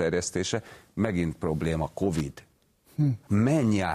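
At 2.15 s a brief burst of loose connector crackle runs for about 55 ms, ending near 2.21 s. A worn contact is making and breaking, chopping the speech into ragged scratches. Its irregular, gritty texture separates it from a single clean digital click.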